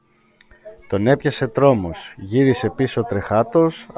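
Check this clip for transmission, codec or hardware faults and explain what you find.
No transmission, codec or hardware faults are audible anywhere in the speech.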